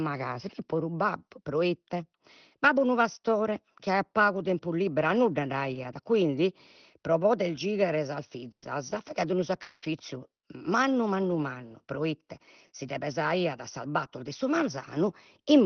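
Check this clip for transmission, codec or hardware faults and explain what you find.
There are three kinds of fault in the second half of the speech, all bunched between about 8.5 and 9.9 s. They sit on top of the normal Opus call coding, whose top end stops at about 6 kHz and whose coding noise fits a bitrate around 20 kbps.

Burst of packet loss, 8.51 to 8.65 s, right after "pro poder gighere sas". A short run of packets never made it in time. The receiver kept the last sound going for about 110 ms, fading it down, and then there's roughly 90 ms of near-silence. About 80 ms of the real audio is simply gone when the speech picks up again. The timing also shifts by about 30 ms as the jitter buffer readjusts.

Lost packet rebuilt from error correction, three single 40 ms frames at 8.62, 8.90 and 9.82 s. Each of these packets was lost, but the next packet carried a low-bitrate copy of it, so Opus played that copy instead of leaving a hole. 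You don't hear a gap. What you hear is a brief patch that's grainier and noisier than the surrounding audio, a quick roughness rather than a dropout.

Long network dropout, 9.62 to 9.85 s. For about 200 ms the last sound is stretched out and faded down, and then there's a short stretch of roughly 30 ms of silence. When the speech resumes, about 200 ms of it is missing. That's most likely a longer stall in delivery, where nothing arrived for that whole stretch, rather than a few scattered losses.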